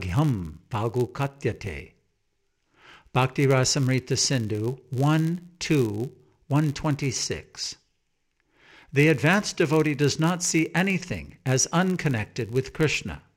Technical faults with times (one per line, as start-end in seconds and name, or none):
0.00-13.36 filter restarted on every block